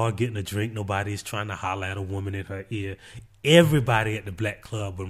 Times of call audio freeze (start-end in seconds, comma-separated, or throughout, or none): none